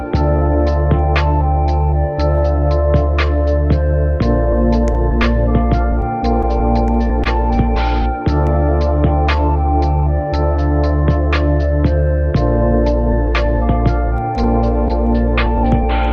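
Clock drift between sender and receiver runs throughout: the sender's clock is about 1.5 percent slow, so the receiver's jitter buffer steadily drains rather than holding level. From 0.22 s to 15.83 s, repeated timing corrections stretch the audio by inserting short repeated pieces. Playback runs at 99 percent speed and gains roughly a fifth of a second overall, heard as faint hiccups and a slightly dragging tempo. At 7.24 to 7.27 s, a short stall from a late packet empties the buffer, and 15 ms of the preceding audio is held until the packet arrives. Nothing is lost, but there is a brief smeared sustain with a slight buzz. This all passes through the Opus call path, whose top end stops near 12 kHz.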